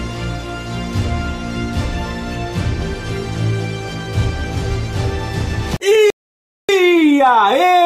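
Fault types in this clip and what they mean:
Playback stall: from 6.10 s to 6.69 s the sound stops in mid-flow for about 0.59 s, then resumes. The output simply goes silent, likely because the player ran out of buffered data or its thread was blocked, until it recovered.
Time-compressed catch-up: from 6.69 s to 7.86 s the audio runs about 1.1 times faster at unchanged pitch. The player is clearing the backlog left by the stall by dropping short slices and cross-fading across the joins.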